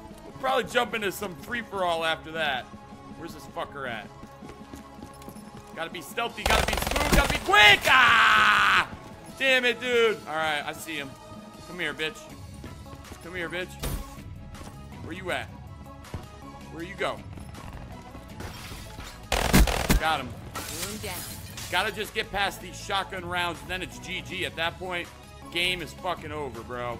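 No technical faults are audible anywhere in this recording.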